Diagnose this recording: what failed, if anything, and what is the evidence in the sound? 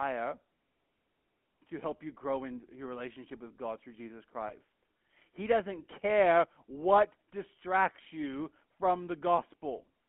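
Codec stage: the GSM full-rate codec runs throughout. Speech is buzzy and gravelly within a 200 Hz to 3.4 kHz band, from pulse-excited vocal-tract modelling, not mere filtering.

Network stage: lost GSM frames at 4.48 to 4.57 s leave a short metallic ring as the last good frame repeats. A ring rather than a click or a silent gap fits one concealed 20 ms frame.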